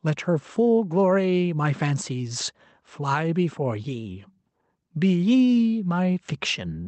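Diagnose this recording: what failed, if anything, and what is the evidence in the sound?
Gain pumping runs throughout the speech: the gain swings roughly 5 dB, pulled down on each loud sound, so loud and soft parts sit closer in level and the speech sounds squashed. On a waveform, the speech envelope looks flattened. The likely cause is excessive input gain feeding a fast limiter or compressor.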